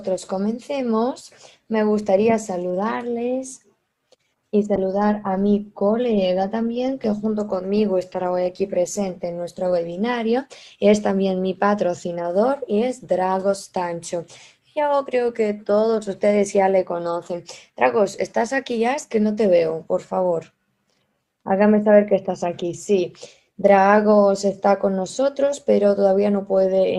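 From 4.77 to 11.03 s, a call bitrate drop makes the sound rough and watery, fitting an encoder squeezed from about 48 to 18 kbps for roughly 4.7 s.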